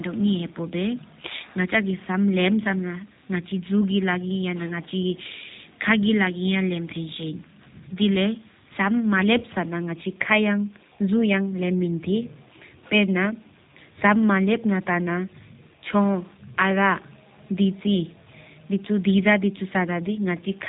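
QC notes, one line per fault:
Throughout, G.729 codec: the speech sounds rough and faintly synthetic, with nothing above 4 kHz and a plainly audible coded grain. That fits G.729A at 8 kbit/s, which rebuilds each 10 ms frame from a vocal tract filter, pitch prediction and sparse pulses.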